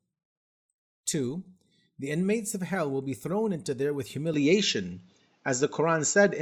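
A speech clip. At 4.34 s, right after "thrown into there with", the sound turns duller and stays so to the end. Nothing above 7.6 kHz remains. The level shifts by about 5 dB and a faint new noise floor appears. There is no gap. The input likely switched to a poorer device.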